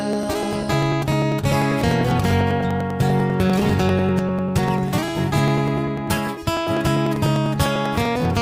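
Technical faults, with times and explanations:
0.13–8.35 s, periodic USB or driver dropouts: every 0.099 s, about ten times a second, roughly a millisecond of audio is skipped outright, so the waveform jumps straight from one stretch to the next. Each join leaves a discontinuity heard as a regular tick, about a hundred in all, and they sound only while there is signal. A spectrogram shows thin, evenly spaced vertical streaks of broadband energy. The waveform shows tiny steps at each join rather than silent gaps.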